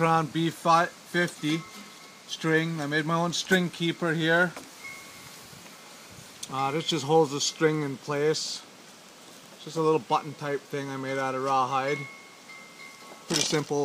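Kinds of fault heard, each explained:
No technical faults can be heard anywhere in the recording; the signal stays steady and intact throughout.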